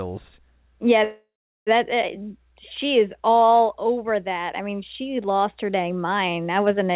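Speech heard over a narrowband call line, with nothing above 4 kHz, which fits G.711 mu-law at 64 kbps. From 1.04 to 1.69 s there is a call audio freeze. The last sound is held as a fading buzz or hiss, then 400 ms of silence. The speech then resumes where it stopped, 626 ms late, with nothing lost. Delayed packets likely ran the jitter buffer empty.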